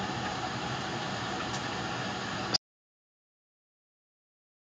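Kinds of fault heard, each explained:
gain pumping: Across the whole clip the gain swings by roughly 15 dB, with loud and soft parts pushed closer in level, so the level sounds squashed and breathing. The likely cause is gain set far too high, with a fast limiter pulling it down.
audio dropout to silence: At 2.57 s the speech cuts off abruptly and the rest of the clip is silence with no room tone at all, so everything after that point is lost. The likely cause is the input being lost while the recorder kept writing silence.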